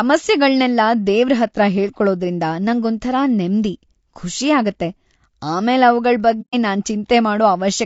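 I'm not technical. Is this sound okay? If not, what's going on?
No. Throughout, the speech sounds rough and grainy, with a hiss-like fizz caught between the tones of the voice and a thin, artificial sheen at the top. The likely cause is low-delay AAC compression, the kind video-call apps use to keep delay short, squeezed hard enough to damage the sound. Unlike a poor microphone or room noise, the grit moves with the voice itself and fades when the speech stops.

Then, from 6.41 to 6.55 s, the sound briefly disappears for about a seventh of a second. This is AAC frame loss with muting: a few chunks of the audio stream never arrived, and the player filled the gap with silence. What marks it out from a cable crackle or a hard dropout is the gentle edges. The sound fades out and back in smoothly.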